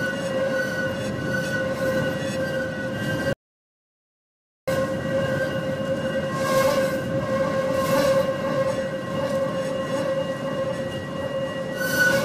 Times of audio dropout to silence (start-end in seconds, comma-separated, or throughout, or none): 3.33-4.67